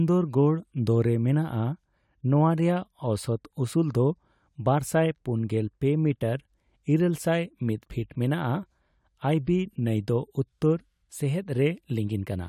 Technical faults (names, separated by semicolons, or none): none